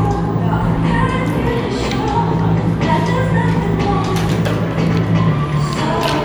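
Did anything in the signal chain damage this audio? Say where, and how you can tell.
No, nothing in the signal chain damaged this audio.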